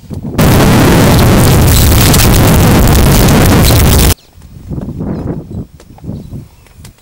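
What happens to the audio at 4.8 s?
Nothing goes wrong at 4.8 s; the audio plays through that moment intact, with no audible fault.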